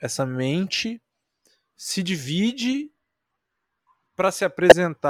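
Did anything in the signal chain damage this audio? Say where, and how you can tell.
Yes. The damage happened at the codec stage. A corrupt frame was decoded at 4.69 to 4.72 s. There is a short glitch near the end of the speech. It lasts about 30 ms, which points to a couple of compressed frames being hit. Flipped bits in those frames were decoded as though they were valid. The misread gains and codes put strong energy at the wrong frequencies, and that is why the glitch is audible.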